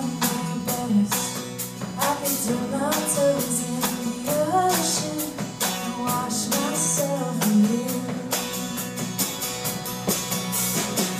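From start to finish, computer activity noise rides on the audio: changing load in the machine's processor, graphics or mouse circuitry shifts the ground the audio path shares, and that disturbance leaks into the recording. It is heard as a thin, whiny buzz pulsing at around 1 kHz, sitting roughly 25 dB below the sound. It flickers and scratches with the computer's own activity rather than following anything in the audio itself.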